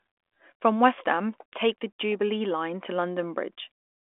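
No technical faults are audible.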